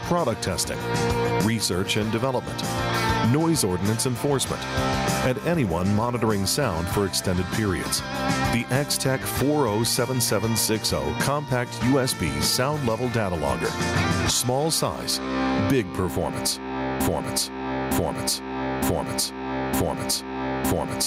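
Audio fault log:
throughout, gain pumping: the input gain is likely set far too high, so a fast limiter clamps down on every loud sound and releases in the gaps, swinging the level by around 15 dB. Loud and soft parts end up closer in level, leaving everything squashed.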